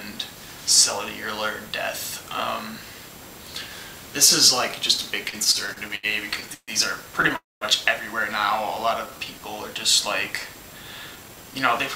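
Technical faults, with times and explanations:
5.29–6.71 s, repeated stalls (stutter): the audio keeps catching and dragging, with 11 short holds adding up to 363 ms, the longest 136 ms, about a quarter of that stretch. Packets were arriving late, so the jitter buffer kept running dry and the receiver stretched the last sound each time. Nothing is lost; it just limps.
7.36–7.64 s, call audio freeze: the sound hangs for 255 ms, the held tail dying away into about 190 ms of silence before picking up again where it stopped. That's likely packets stuck in transit emptying the buffer, so a gap was pushed in and the delay grew by 255 ms.
9.07–9.40 s, jitter buffer slow-down: the audio runs at about 84% speed with the pitch unchanged, sounding drawn out, since 63 ms was added. The buffer was building up a reserve by repeating single pitch periods or bits of pause over and over.
11.16–11.55 s, jitter buffer speed-up: the audio runs at about 116% speed with the pitch unchanged, sounding hurried, as the receiver shaved out tiny pitch-period slices totalling around 70 ms. 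The buffer was holding more than its target, so it trimmed to bring the delay back down.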